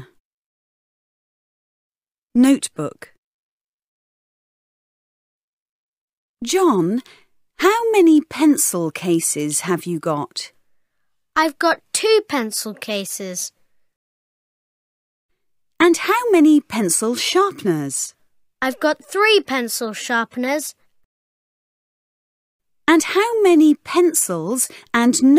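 There are no technical faults to describe in this audio.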